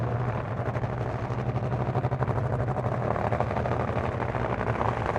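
Nothing is technically wrong with this clip of sounds.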